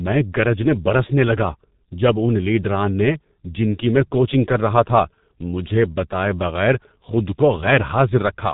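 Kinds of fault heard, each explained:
G.723.1 codec: The whole clip has gone through this old internet-phone codec, and it's badly mangled. Everything above 4 kHz is simply gone, so the speech sounds dull and boxy. The codec's voice model updates only every 30 ms, so consonants smear together and there's a rough, hoarse edge on the voiced parts. That heavy damage comes even at the higher of its two rates, around 6.3 kbit/s.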